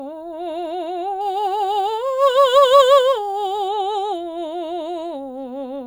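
Crude rate conversion runs from 1.21 to 3.68 s in this music: the audio was taken from 48 kHz to 44.1 kHz by picking the nearest sample, unfiltered, so a patterned error sits roughly 30 dB below the signal, a gritty inharmonic fizz tracking loud and high passages.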